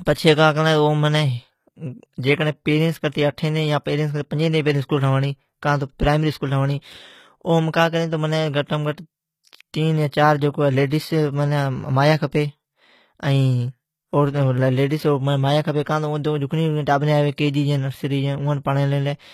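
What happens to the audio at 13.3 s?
At 13.3 s the speech carries the same damage it has across the whole clip, most likely from HE-AAC compression at a low rate, which fits a bitrate around 20 kbps. The codec spends its bits on the lower spectrum and rebuilds the top by copying lower bands upward under a rough envelope, so the treble is synthetic and its harmonics fail to align with those below. The s sounds turn gritty and lispy, with a metallic sheen.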